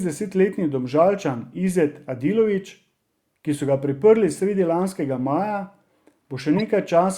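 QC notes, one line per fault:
6.57–6.61 s, corrupt frame decoded: A short glitch cuts across the speech for about 40 ms. It sounds like roughly two damaged compressed frames. Their bits were flipped, but the decoder played them anyway. Misread gains and codes placed energy at the wrong frequencies, so the error is a brief burst of misplaced sound. It peaks at about -15 dBFS. It stops when the next clean frame arrives.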